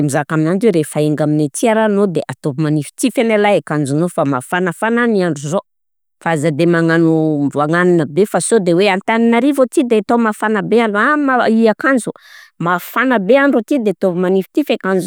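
No technical faults are audible.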